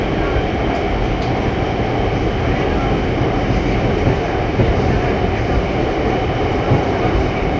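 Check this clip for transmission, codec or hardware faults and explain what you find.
I find no faults in the clip.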